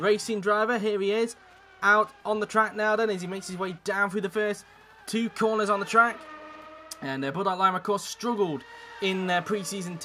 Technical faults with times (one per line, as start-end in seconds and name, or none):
none